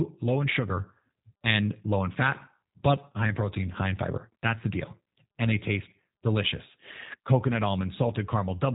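G.729 codec, throughout: speech rebuilt from a vocal-tract filter and sparse pulses sounds plainly rough and synthetic, cut off above 3.8 kHz, fitting 8 kbit/s.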